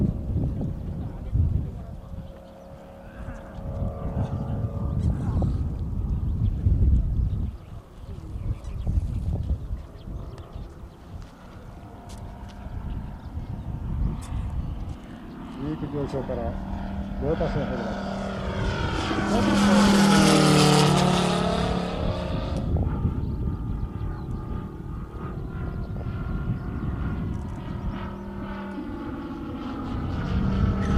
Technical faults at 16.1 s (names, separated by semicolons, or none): DAB burbling